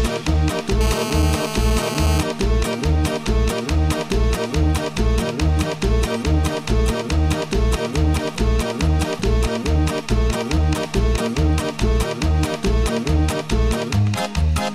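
From 0.81 to 2.21 s a hard, raspy buzz sits under the sound, pitched at 216.7 Hz and thick with harmonics, running steadily about 8 dB below the signal and bearing no relation to it. This is GSM phone buzz: a nearby 2G phone in a call was transmitting bursts 216.7 times a second, and the audio circuitry rectified those radio pulses into an audible tone.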